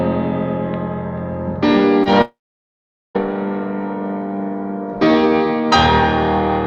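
At 2.03 to 2.08 s there is a short concealed packet loss: roughly 20 ms of the stream did not reach the decoder in time, and the receiver covered a gap of about 21 ms by extending the preceding sound before crossfading back into the received audio. It comes across as a brief smear or wobble rather than a clean cut.

From 2.22 to 3.17 s the audio breaks off in a way that points to a long network dropout as the likely cause, with about 940 ms of signal missing. The receiver first continues the last sound as a fading buzz or hiss, then the output settles into about 0.81 s of silence. When the audio resumes near 3.17 s, the missing portion is simply absent from the playback.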